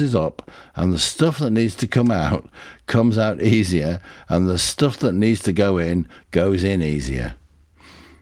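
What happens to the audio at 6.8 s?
Nothing goes wrong at 6.8 s; the speech carries on intact, with no dropout, glitch or distortion at that point.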